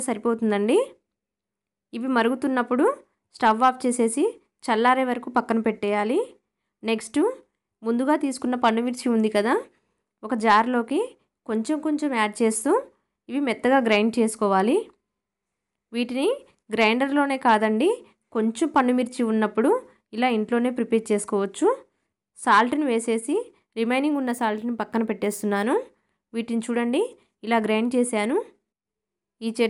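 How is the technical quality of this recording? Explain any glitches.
One glitch stands out, between 24.13 and 25.63 s: imaging from linear upsampling. The sound points to a 24 kHz source raised to 44.1 kHz by straight-line interpolation, a weak filter. The top band dulls, and a faint mirrored copy of the spectrum, roughly 30 dB down, sits from 12 to 24 kHz, giving sibilant and bright moments a light metallic shimmer.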